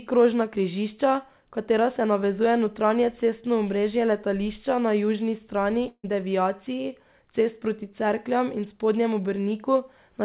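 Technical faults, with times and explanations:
5.88–6.05 s, long network dropout: after "letališča na južni strani" the sound smears into a fading buzz, then briefly goes silent, with about 160 ms lost, likely to dropped packets. The spectrogram shows smeared bands under the 4 kHz ceiling fading to blank, and the waveform a decaying tail, then flat.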